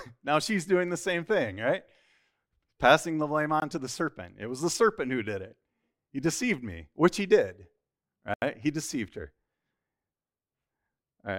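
A block of digital silence hits at 3.60 to 3.62 s, between "the blame" and "to the serpent", and again at 8.34 to 8.42 s. In each, a stretch of samples drops straight to silence, most likely because the output buffer was not filled in time. With no fade, the sound cuts out and back abruptly: the 20 ms gap is a brief dropout, while the 80 ms gap opens an audible hole in the speech.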